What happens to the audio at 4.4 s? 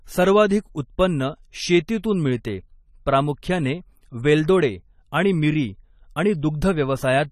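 At 4.4 s, as across the whole clip, the speech shows AAC compression, likely from low-rate AAC-LC coding that fits about 32 kbps: coarse quantisation strips content above 14 kHz, leaving the sound dull and smeared, with a warbling, fizzy texture on sibilants.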